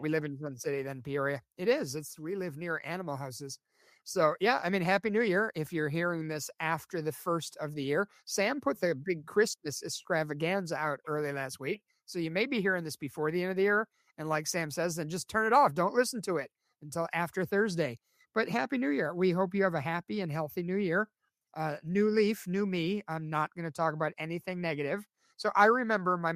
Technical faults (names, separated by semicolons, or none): none